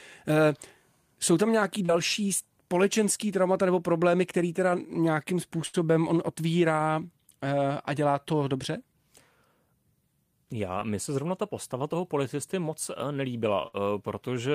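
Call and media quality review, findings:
Short concealed packet loss at 1.85–1.90 s and 10.80–10.83 s. Brief smear. Jitter buffer or network concealment. Last sound extended over the gap; about 40 ms and 20 ms of audio lost.

Burst of packet loss at 5.66–5.76 s and 13.67–13.74 s. Extended sound, held or fading, then a jump ahead. Network loss; about 80 ms and 40 ms missing.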